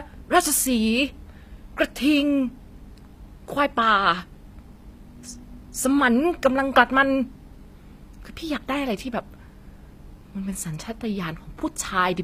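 Across the whole clip the speech carries plainly audible damage, with gritty, metallic s sounds and nothing above 15.5 kHz. That's likely HE-AAC compression at a low bitrate, maybe around 24 kbps, where the treble is rebuilt from copied lower bands rather than coded directly.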